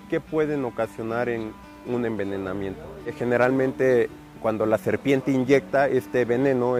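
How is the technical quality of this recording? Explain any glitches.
Nothing here jumps out as a glitch; the recording just runs along without any technical hiccups to point to.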